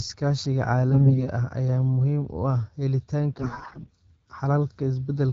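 AMR bit errors strike from 0.92 to 1.27 s and again from 3.32 to 3.91 s. Flipped low-priority bits in the AMR-WB frames, at a rate of around 15 percent, misplace the excitation pulses and skew the pitch, gain and spectral detail, so the speech keeps its level but turns hoarse and gargly.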